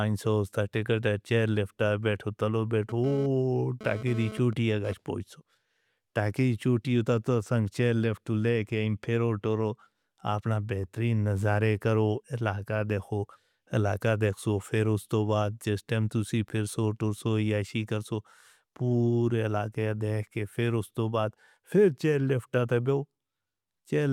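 From 2.89 s to 4.93 s, between "پھٹ آئے بیٹھو تلو" and "پوے سو", a GSM phone buzz cuts in about 14 dB below the speech. A nearby 2G handset's radio bursts, repeating 217 times a second, are being rectified in the audio circuitry, producing a hard, raspy 217 Hz buzz rich in harmonics. Unlike mains hum, its fundamental is not a multiple of 50 or 60 Hz, and it starts and stops abruptly, which fits a data transfer rather than a call.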